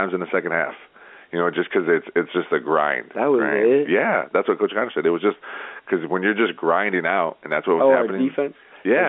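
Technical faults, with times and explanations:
Throughout, gain pumping: the level is pulled down as each loud stretch of speech arrives, with a swing of around 10 dB. Loud and quiet passages end up squashed close together in level. The likely cause is microphone gain set far too high, with a fast limiter or compressor clamping each peak and releasing in the gaps, all within the narrow telephone band of 250 Hz to 3.5 kHz.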